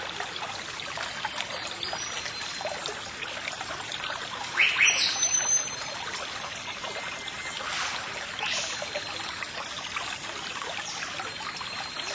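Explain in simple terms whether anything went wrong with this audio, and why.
Nothing went wrong here: the sound has passed through a call's normal microphone processing, which trims away the deepest bass and leaves nothing above about 8 kHz, exactly as a phone or video call is meant to.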